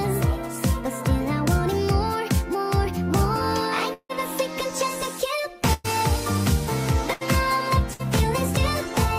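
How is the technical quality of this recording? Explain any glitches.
Four transmission glitches interrupt the sound, one longer dropout and three shorter losses.

Long network dropout, 3.93 to 4.11 s: about 160 ms of audio never arrived, likely a network stall. The receiver stretched the last sound into a fading buzz or hiss, then left about 50 ms of silence before the audio picked up later, skipping what was lost.

Bursts of packet loss at 5.73 to 5.86 s, 7.13 to 7.23 s and 7.93 to 8.01 s removed about 120, 80 and 60 ms. Each time the preceding sound is held and faded as a brief buzz or hiss, then the audio jumps ahead past the gap.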